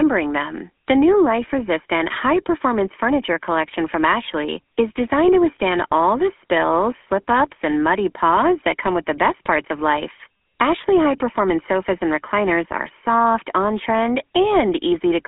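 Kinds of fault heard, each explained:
GSM full-rate codec: Heard across the whole clip, this early mobile codec rebuilds the speech from a vocal-tract filter fed by a coarse, regularly spaced pulse excitation. That gives the plainly audible buzzy, gravelly roughness here, and the low rate fits a 13 kbps stream. The sound sits in a telephone band of roughly 250 Hz to 3.4 kHz. A spectrogram shows a hard ceiling with nothing above 3.7 kHz and thin lows under 250 Hz.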